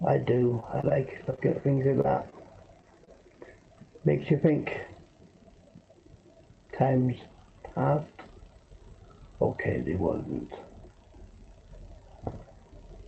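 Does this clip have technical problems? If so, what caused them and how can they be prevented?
Yes. Scattered short gaps between 0.37 and 3.09 s: about ten lost or late packets, each patched by extending the preceding sound, leaving brief ticks and smears, the longest around 30 ms. A larger jitter buffer and forward error correction on a steadier network connection would prevent them.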